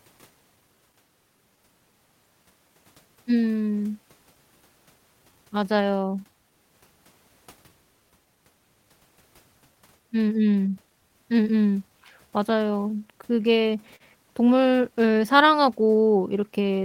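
Clock drift between sender and receiver runs through the whole clip. The sender's clock is a few percent slower than the receiver's, so the jitter buffer keeps draining and the receiver has to fill gaps. The speech drifts behind real time throughout.

Repeated timing corrections run from 0.03 s to 16.73 s. The receiver keeps repeating short pieces to stay in step, slowing playback to 97% speed and adding about half a second overall. These edits come at uneven spacing.

A short stall from a late packet occurs from 13.96 s to 14.03 s. A packet missed its deadline and the buffer ran empty, so the receiver held the last sound for 42 ms until it arrived. Nothing is lost, but one sound lingers with a faint buzz or dip.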